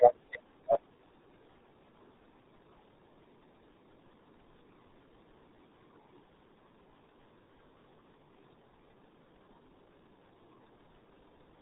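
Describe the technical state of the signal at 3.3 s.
At 3.3 s the speech is muffled and gargly, with a smeared, bubbling texture and no brightness at all, because nothing above 3.8 kHz survives. This is the RealAudio 14.4 codec, and it runs through the whole clip. The heavy damage fits its 8 kbit/s dial-up budget: the coder keeps only a crude model of the voice in the narrow band below 4 kHz, and its coarse quantisation produces the gurgling artefacts.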